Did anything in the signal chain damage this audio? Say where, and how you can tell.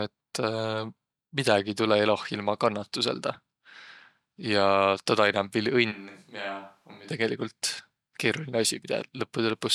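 Yes. From 5.93 s to 7.09 s the speech abruptly turns roomy and hollow, loses its low end, drops by roughly 10 dB, and sits on a much more audible noise floor, around 30 dB below the speech. It snaps back just as suddenly. This points to the capture stage: the close microphone's feed likely dropped out, and a switch to a distant microphone took over, picking up more room reflection and ambient noise than direct sound.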